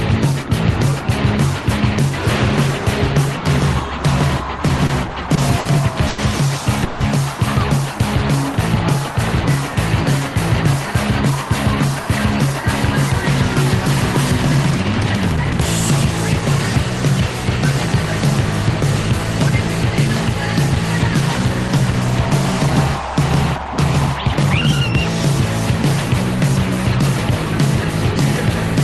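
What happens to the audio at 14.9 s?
A jitter buffer speed-up runs from 14.18 s to 16.59 s, covering the moment at 14.9 s. The receiver's buffer had built up more audio than it targets, so it trimmed short slices of one or a few pitch periods, many times in a row, to draw the delay back down. Across the span, roughly 40 ms disappears and the audio plays about 1% fast with its pitch unchanged, rather than leaving any audible gap.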